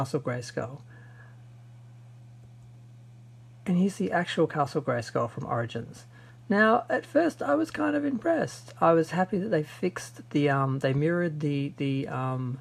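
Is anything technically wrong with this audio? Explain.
No, there's nothing technically wrong with this audio.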